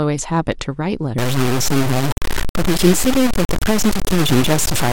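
From 1.18 s to the end at 4.93 s, the speech turns harsh and grainy, with the distortion rising and falling with the voice, and its quietest moments sputtering or dropping out entirely. This is low bit depth without dither, likely from the signal being truncated to 3 bits, which leaves an error nearly as loud as the speech itself. Dithered requantisation would leave a steady hiss, but this grit follows the signal and goes silent when it does.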